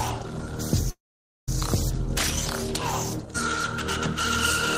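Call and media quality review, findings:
Call audio freeze, 0.90–1.49 s: sound stretches into a fading buzz or hiss, then 0.51 s of silence; resumes where it stopped, nothing lost, 572 ms delay added. Likely jitter buffer underrun from delayed packets, with receiver concealment filling the gap.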